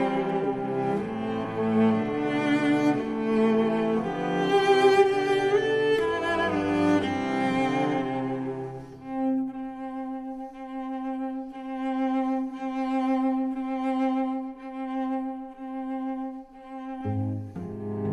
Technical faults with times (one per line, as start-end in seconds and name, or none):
none